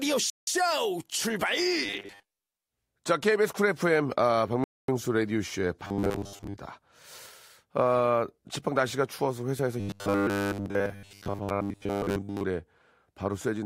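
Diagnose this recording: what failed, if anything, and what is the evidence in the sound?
The wireless playback link failed twice, most likely a Bluetooth stall, where interference delayed packets until the headphones' buffer emptied. The sound drops to dead silence from 0.30 to 0.47 s, about 173 ms, and again from 4.64 to 4.88 s, about 244 ms, then resumes. Each gap is a pause while the receiver waits for retransmitted packets, not a level dip. The speech carries on rather than repeating, which marks it as an underrun on the link.

The driver or buffer stage was being fed too seldom, most likely giving robotic sound from repeated short buffers, as the player looped the last fragment of audio to fill each gap. The speech turns to a rigid metallic buzz at 1.86 to 2.52 s, 5.85 to 6.56 s and 9.8 to 12.44 s, with the buzz at a fixed rate of 100 Hz. That rate fits a 10 ms fragment being repeated, and most of the real audio in those stretches is skipped.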